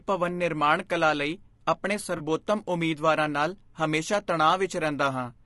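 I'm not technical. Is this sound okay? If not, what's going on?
No. Throughout, the speech sounds rough and grainy with a dull or artificial top end, likely from low-delay AAC compression of the kind used for video calls. At 2.17 to 2.21 s there is an AAC frame loss with concealment: a tiny piece of sound went missing and the decoder filled the gap with a brief smeared, noisy blip.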